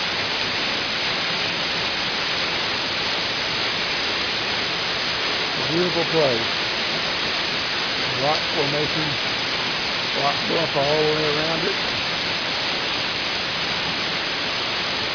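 No technical faults can be heard anywhere in this clip.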